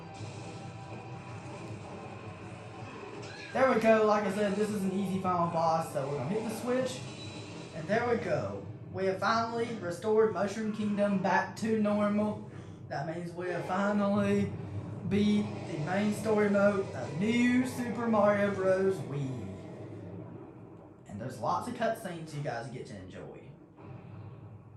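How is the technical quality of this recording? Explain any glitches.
No glitches are audible anywhere in the recording.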